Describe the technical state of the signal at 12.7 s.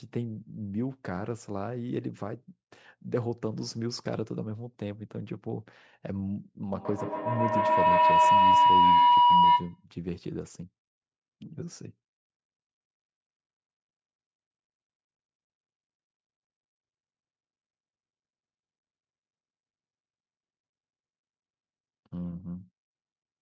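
At 12.7 s the speech is intact, with no dropout, distortion or other fault, only the normal narrowing of a call microphone path that leaves nothing above 8 kHz and trims the lowest bass.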